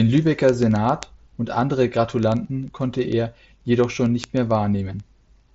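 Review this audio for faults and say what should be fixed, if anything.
Word clock ticks run through the speech from 0.13 s to 5.53 s, around a hundred sharp clicks about every 40 ms. The receiving device is reading a digital link on its own clock rather than locking to the sender's. The two drift apart by something like 500 ppm, so a single sample is dropped or repeated at each slip, producing a tick. The band-limit near 7.7 kHz comes from the mSBC headset path. Prevention: slave the receiver to the incoming word clock or run both devices from one master clock.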